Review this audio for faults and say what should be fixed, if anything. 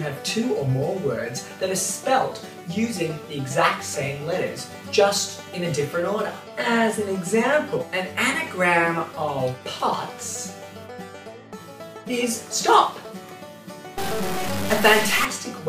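From 13.98 to 15.25 s the sound turns harsh and buzzy, likely a stuck bit, with samples jumping by a step of around -20 dBFS. Worth checking the converter and its data lines so no bit can latch.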